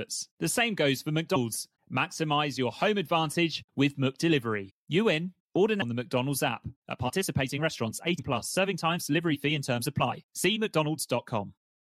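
The decoder dropped compressed frames at 1.35–1.37 s after "same goes for", at 4.69 s, at 5.81 s, and at 8.18 s between "participating restaurants" and "plus serving times delivery". Each time the speech jumps ahead by about 150 ms, roughly seven frames of 23.2 ms.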